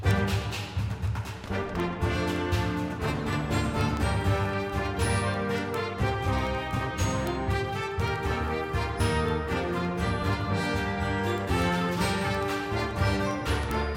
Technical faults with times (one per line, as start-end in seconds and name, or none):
0.11-13.96 word clock ticks